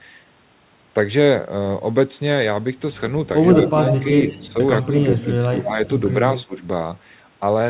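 Around 3.67 to 3.71 s a faint echo leak shows up: a copy of the speech trailing by about 140 ms, roughly 15 dB down. It gets much stronger from 3.88 to 4.06 s, only about 5 dB under the direct sound. The likely cause is a far-end speakerphone whose echo canceller didn't fully cancel its own loudspeaker pickup and sent the remainder back.

Overlapping that, from 4.0 to 4.56 s, the speech suppressed in double talk kicks in. The level dips by up to about 10 dB over a couple of hundred milliseconds, with the talker sounding briefly pushed back. Inside that span, 4.25 to 4.48 s carries another quieter echo scrap at the same 139 ms lag.

At 4.84 to 4.97 s there's a shallow dip of about 5 dB. Then 5.21 to 5.8 s gets hit hardest for duration, with around half a second of ducking reaching about 15 dB down. That's most likely the canceller clamping down on both sides while both were talking, unable to tell the local voice from the echo.

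Last, 6.36 to 6.58 s brings one more echo leak around 15 dB below the speech, and right in the middle, 6.45 to 6.55 s, the speech briefly drops by about 20 dB, almost a cutout. Throughout, the sound is band-limited with nothing above 4 kHz, which fits the G.711 mu-law call path.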